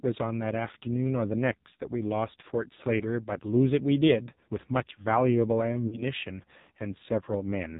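From start to end the speech runs through the AMR narrowband mobile codec: nothing above 4 kHz, with a buzzy, synthetic edge and heavy damage that fits a low mode near 5.9 kbps, unlike a clean band-limited phone line.

From 5.88 to 6.03 s, lost AMR speech frames, about 40 ms, fitting two frames, make the decoder stretch the last sound with falling level and then recover roughly, rather than cutting abruptly to silence like a plain dropout.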